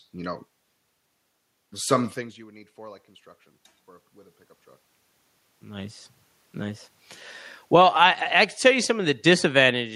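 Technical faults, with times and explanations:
7.6 to 7.98 s, automatic gain falling: the automatic gain control judged the input too loud, or its background noise too strong, and lowered its gain by about 4 dB across 0.38 s, so the speech and the room noise beneath it sink together rather than the voice alone.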